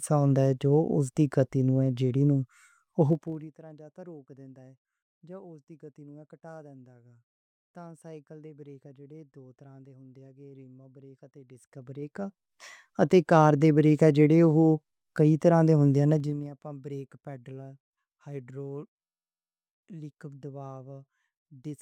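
Gain changes are applied in unsmoothed 2 dB jumps, causing zipper noise: a fast ticking rides on the speech as the level drops roughly 25 dB from 3.09 to 3.51 s, climbs back from 11.45 to 12.6 s with slower clicks, and falls roughly 20 dB from 16.12 to 16.5 s.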